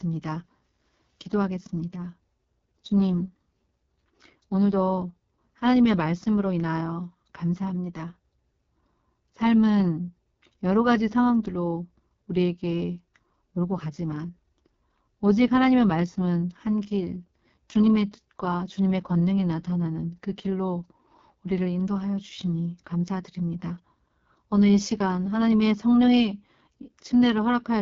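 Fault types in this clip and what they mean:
AMR wideband (HD Voice) codec: The speech runs through a low-rate wideband phone codec that models the vocal tract and drives it with coded pulses, then fills the very top band with shaped noise. The damage here is heavy: the voice sounds rough and raspy throughout, which fits the codec's lowest mode, around 6.6 kbit/s. There is no content above about 7.2 kHz, and the band above 6.4 kHz carries only shaped noise rather than detailed speech.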